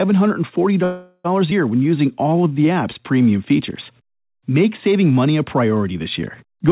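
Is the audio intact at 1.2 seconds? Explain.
No. At 1.2 seconds the sound is replaced by a synthetic continuation: from 0.84 to 1.26 s the last sound is stretched into a buzzy, hissy tone that fades, touching silence for about 10 ms, before the audio resumes where it left off. This is a call audio freeze, likely caused by packets held up in transit so the jitter buffer ran dry. Nothing is lost, but everything after arrives about 0.4 s late.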